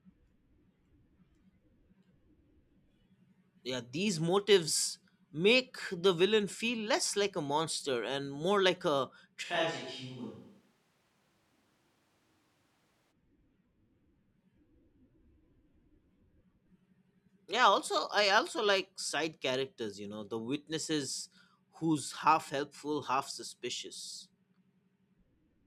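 From 9.45 to 13.11 s the speech abruptly goes roomy and hollow, losing low end, dropping roughly 5 dB, and picking up more background noise. That points to a switch to a distant microphone, likely because the close mic dropped out, before it snaps back.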